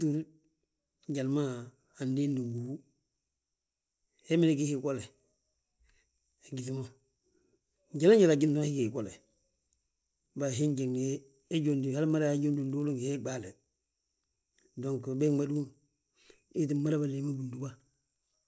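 Speech with a 50 Hz buzz running through the whole clip. It comes from a resampler restarted on every block. Each 20 ms block was converted separately, leaving a small error at every edge. This fits a 24 kHz to 16 kHz conversion. The buzz rides only on the speech.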